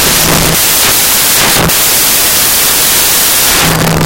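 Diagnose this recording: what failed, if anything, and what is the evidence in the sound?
Samples built from the wrong bytes, throughout: sample-format conversion misassembles the bytes of each sample, so fast-changing low bits dominate, producing loud, harsh broadband noise.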